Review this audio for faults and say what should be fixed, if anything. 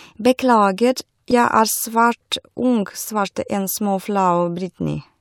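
At 1.31 s the speech is interrupted by a brief glitch, the mark of damaged data in a compressed stream. A short stretch of the encoded bytes there is corrupt, so the decoder cannot parse the affected frame, loses sync and skips forward to the next valid frame header. What comes out is a blip lasting about 10 ms. To prevent it, verify file or stream integrity with checksums, and re-fetch or re-encode from a clean source when a check fails.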